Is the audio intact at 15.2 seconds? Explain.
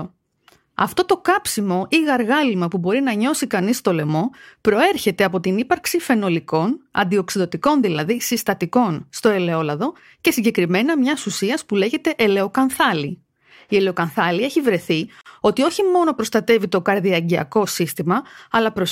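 No. From 15.21 to 15.26 s, between "ελαιοκανθάλη έχει βρεθεί" and "ότι όχι μόνο προστατεύει", there is a gap at a join of encoded pieces. The 45 ms gap has smeared edges, so its silent part is shorter. It sits where separately encoded segments were joined with their encoder start delay and final-frame padding left in.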